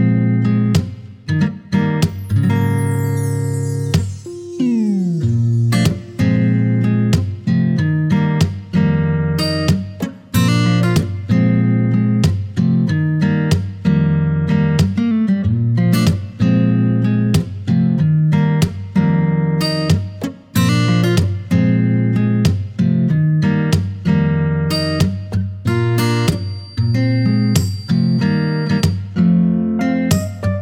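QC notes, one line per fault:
26.03–29.02 s, feedback whistle: a thin, steady tone at 4.7 kHz sits about 25 dB below the sound, swelling and fading slowly in level without growing. This is likely a loudspeaker-to-microphone loop held right at the edge of instability, so that one frequency keeps ringing.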